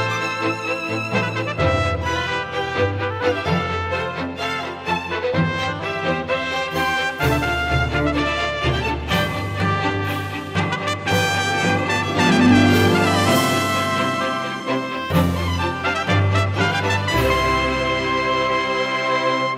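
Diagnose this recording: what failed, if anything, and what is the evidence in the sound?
Nothing failed: no stage in the chain, from wiring and conversion through processing, transmission and playback, leaves a detectable mark anywhere in the recording.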